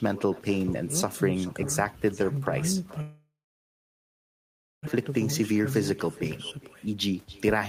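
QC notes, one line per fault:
Throughout, echo with no canceller: every phrase returns roughly 0.4 s later as a quieter copy, about 21 dB down, and thinner, because the far end's loudspeaker feeds its microphone with nothing removing it. On a spectrogram each syllable has a faint delayed twin trailing behind.
3.01 to 4.89 s, long network dropout: audio stops arriving for about 1.85 s. The last sound is stretched into a fading buzz, then about 1.53 s of near silence, and about 1.2 s of material never returns. The waveform shows a decaying smear, then a flat gap. A delay jump of roughly 0.7 s is the likely cause.
5.09 to 5.60 s and 6.04 to 7.55 s, jitter buffer speed-up: after the gap the buffer holds too much audio, so short pitch-period pieces are cut repeatedly. Playback runs about 7% fast in the first stretch, then about 23% fast, at unchanged pitch, sounding hurried. The spectrogram shows compressed syllables with harmonics at normal spacing.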